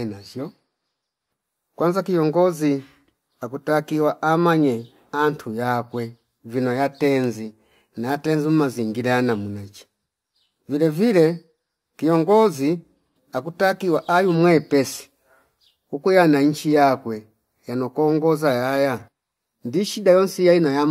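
From about 6.50 s to 14.35 s there's crude rate conversion. It sounds like a 44.1 kHz to 48 kHz change done by just repeating nearest samples, unfiltered. That leaves a gritty, inharmonic fizz riding on the speech, roughly 30 dB down.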